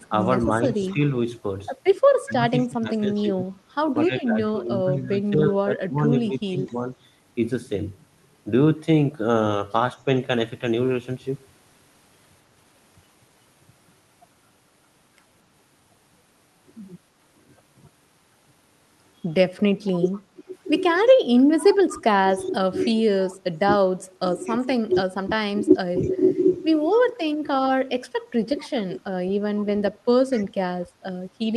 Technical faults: echo leak; speech suppressed in double talk

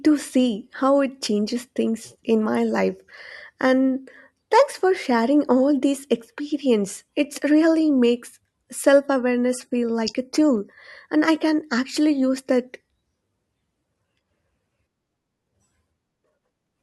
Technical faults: adaptive stream at a lower bitrate

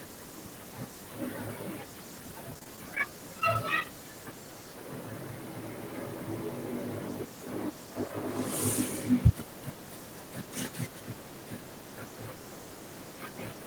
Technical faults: repeated packet loss (robotic sound); short concealed packet loss

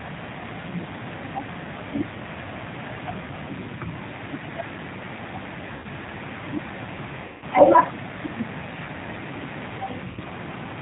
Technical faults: G.729 codec; VoIP packet loss concealed by the speech codec

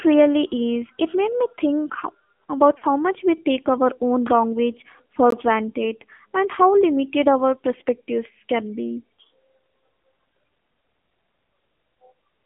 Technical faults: AMR narrowband mobile codec; lost AMR speech frames; block of digital silence

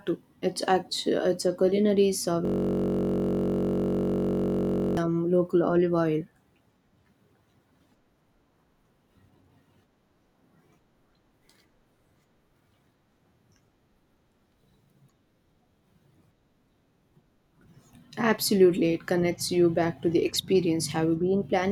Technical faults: system hang loop

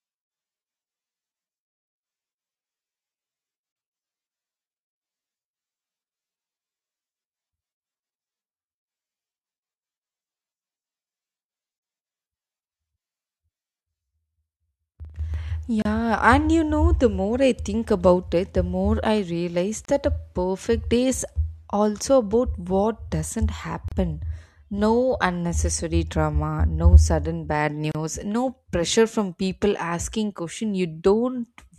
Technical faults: gap at a join of encoded pieces

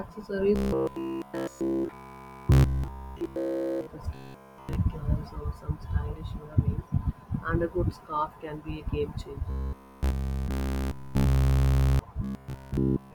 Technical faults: robotic sound from repeated short buffers

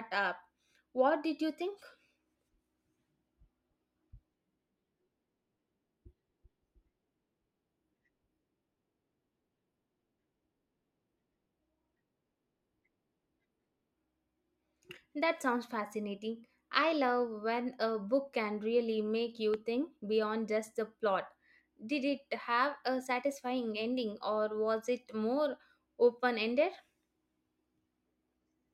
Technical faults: loud pop

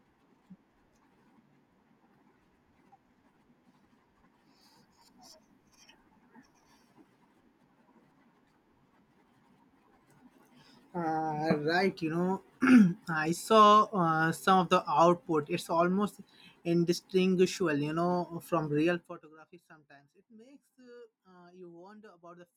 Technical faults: zipper noise

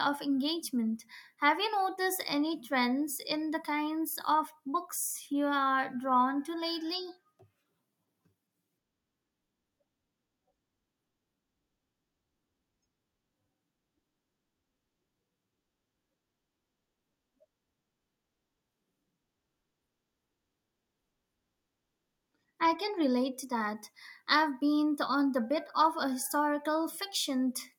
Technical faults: none

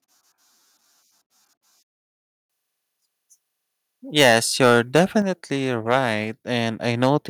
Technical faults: microphone overload; microphone volume stepped down

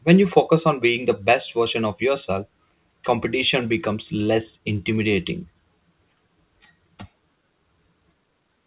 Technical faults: none

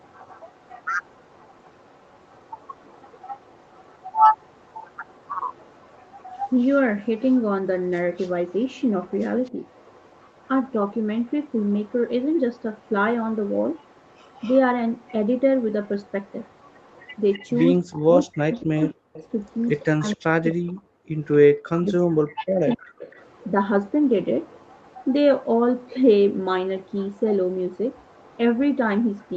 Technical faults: echo leak; speech suppressed in double talk; background gated by the echo canceller

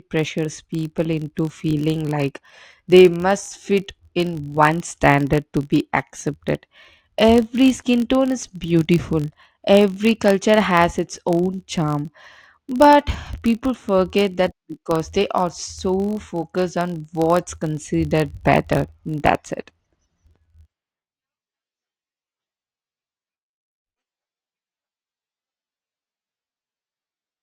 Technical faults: filter restarted on every block

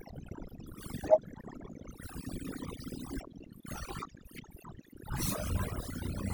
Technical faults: overdone noise removal

